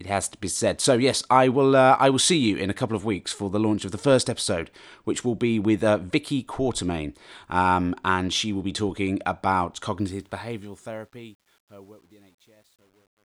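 A speech clip whose closing fade-out, starting around 10 s, turns gritty and grainy from 9.99 s onward, and is at its worst between 10.96 and 13.34 s. This is truncation distortion on a fade. The fade stage rounds its output to too few bits, which fits roughly a 10-bit stage, and adds no dither. As the level sinks toward the smallest step, the waveform collapses into coarse square steps.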